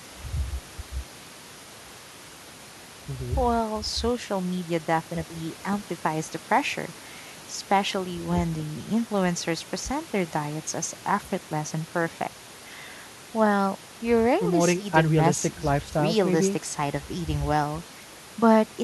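No technical faults occur at any point in the recording.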